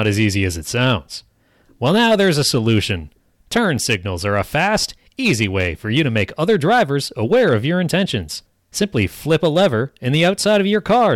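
Speech with hard clipping running the whole way through: the level was driven about 6 dB past what the chain could pass, so peaks get sliced flat. Only a couple of percent of samples hit the ceiling, but those flat tops throw off high harmonics, giving a gritty crackle on the louder syllables.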